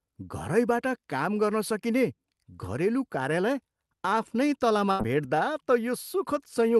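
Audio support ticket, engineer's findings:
Burst of packet loss, 4.91 to 5.01 s: last sound held and faded for about 75 ms as a buzz or hiss, then playback jumps ahead, with roughly 80 ms of audio skipped. Jitter buffer concealment in the Opus call path. Spectrogram: smeared, repeating harmonics decaying, then an abrupt onset.

Lost packet rebuilt from error correction, 4.99 to 5.01 s: one 20 ms frame rougher and noisier, no gap. Opus in-band FEC, with the decoder playing the low-bitrate copy from the following packet. Spectrogram: a grainier, blurred band at the tail of the concealed stretch. Waveform: continuous.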